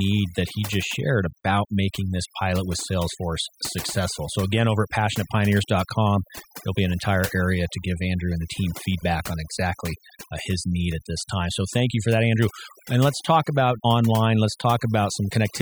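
Overdone noise removal runs through the whole of this speech recording. A noise reducer set far too aggressively is cutting individual frequency bands down hard whenever they come close to its noise estimate, and the quieter parts of the voice get caught along with the noise. Between phrases the background drops and breaks up into twinkling specks.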